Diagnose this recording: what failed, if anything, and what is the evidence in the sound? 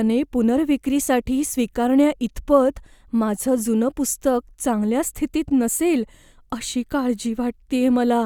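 Nothing in this speech recording points to a failure anywhere along the chain, so there's nothing here to diagnose.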